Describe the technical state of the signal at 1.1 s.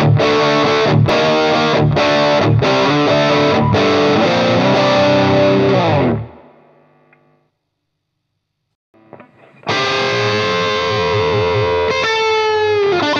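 At 1.09 s there is a single jump where the sound skips forward abruptly, the signature of a dropped buffer (overrun). The likely cause is that the capturing software failed to read its samples before the hardware overwrote them, so a few milliseconds of audio are simply missing and the two sides are joined directly. On a waveform this shows as a sudden step or kink with no gap of silence, and a spectrogram shows a thin vertical broadband line at that instant.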